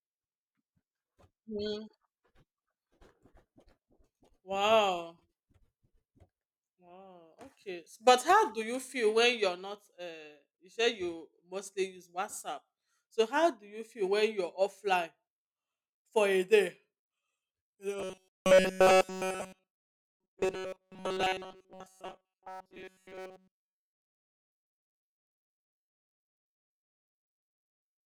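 From 18.0 s to the end at 28.1 s, the speech becomes a rigid, metallic buzz at 188 Hz that only loosely tracks the words: robotic sound from repeated short buffers. Almost nothing gets through unrepeated, likely because audio arrived too seldom and a roughly 5 ms chunk kept being looped instead.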